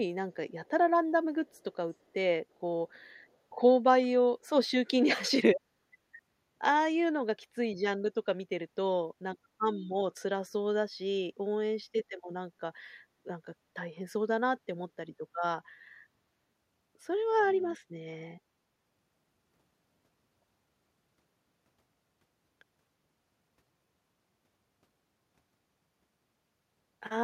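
Echo leak from 1.47 to 1.75 s: a very faint copy of the speech returns about 349 ms behind the original, likely because a loudspeaker on the far end fed the microphone and its echo canceller let a scrap of that pickup slip back.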